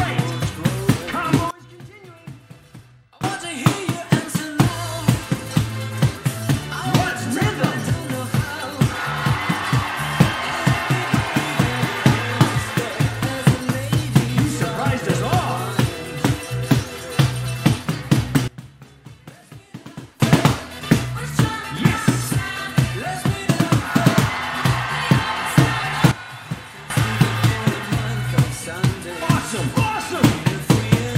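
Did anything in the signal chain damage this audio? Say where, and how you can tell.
Yes. There are three sudden gain jumps. The level drops by about 21 dB from 1.51 to 3.24 s, by about 20 dB from 18.48 to 20.20 s, and by about 12 dB from 26.11 to 26.90 s. Each time it snaps back up just as abruptly. The background noise falls and recovers with the sound, so the change was applied to the whole digital signal, not at the source. The likely cause is a digital gain setting in the processing chain switching instantly, with no ramp.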